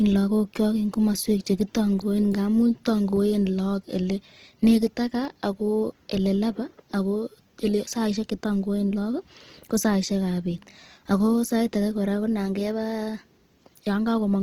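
From start to finish the speech carries plainly audible coding damage, most likely Opus compression running in its CELT music mode at a low rate, which fits something around 16 kbps. The bandwidth stays full, but the encoder lacks the bits to code fine spectral detail, so it fills bands by folding lower ones or injecting noise. The result is a rough, grainy texture on voiced sounds rather than swirling holes, with tonal parts turning noisy.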